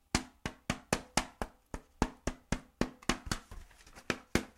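A recording of sounds with no technical faults in the signal.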